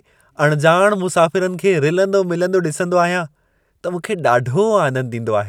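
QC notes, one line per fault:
No faults heard; nothing to log for this speech recording.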